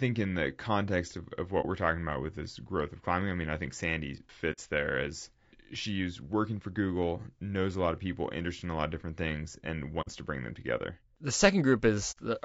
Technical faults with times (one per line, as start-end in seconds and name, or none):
0.00-12.45 low-delay AAC compression
1.61-1.65 AAC frame loss with muting
4.52-4.59 AAC frame loss with muting
10.01-10.09 AAC frame loss with muting
12.11-12.18 AAC frame loss with muting